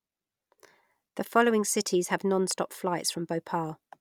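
No technical faults can be heard anywhere in this recording.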